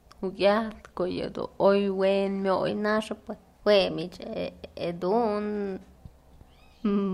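Speech clip with a wrong sample rate from 2.69 s to the end: speed rises 1.09 times and pitch about 1.5 semitones together, which fits 44.1 kHz audio played at 48 kHz, unlike a pitch shift alone.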